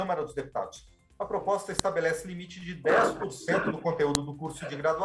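A WAV file header played as audio: pieces were joined with their headers left in, so those bytes play as samples, giving sharp snaps at 1.79 and 4.15 seconds.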